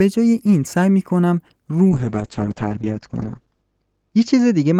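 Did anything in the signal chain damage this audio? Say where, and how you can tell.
Yes: a call bitrate drop in the codec from 1.91 s, 32 to 8 kbps, makes speech watery and band-limited to 8 kHz, not just filtered.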